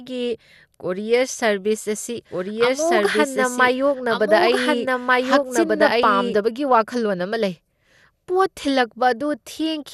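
From the start the speech sounds dull and gurgling, with a granular roughness and nothing above about 12.2 kHz. This is likely MP2 compression at a low rate, which fits about 80 kbps, where starved upper sub-bands switch off and the remaining bands are coarsely quantised.

From 2.31 to 6.35 s a doubled audio track appears: an equally loud, full-band copy of the speech runs about one and a half seconds behind, starting and stopping abruptly with no room decay. This likely comes from a second, slower capture path mixed in.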